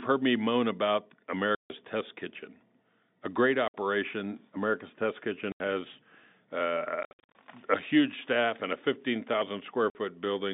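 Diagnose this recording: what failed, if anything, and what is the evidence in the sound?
The failure is at the network stage: packet loss filled with silence. The speech drops to dead silence with hard edges at 1.55–1.7 s (after "heard me moan about"), 3.68–3.74 s (after "a great"), 5.52–5.6 s and 9.9–9.95 s, plus a scattered cluster of short holes over 7.03–7.35 s, none longer than 60 ms, just before "a huge staff and". The gaps run 150, 60, 80 and 50 ms, all multiples of 10 ms, which fits lost 10 ms packets replaced with silence. The G.711 telephone band of 200 Hz to 3.7 kHz is audible throughout. A noise gate or level dropout would fade in and out. A driver underrun would repeat at a steady buffer interval. These holes cut off abruptly at irregular times, and nothing conceals them.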